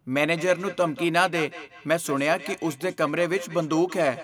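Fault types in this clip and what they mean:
Feedback echo between two devices: Two devices in the same room are on the same call. One plays back what the other's microphone sent, and that microphone picks it up again. Each echo canceller only removes its own device's playback, so this loop escapes both. From 0.37 s to the end, the speech comes round again at a steady gap of about a fifth of a second. The repeats sound thinner and ringing, peaking about 14 dB below the speech.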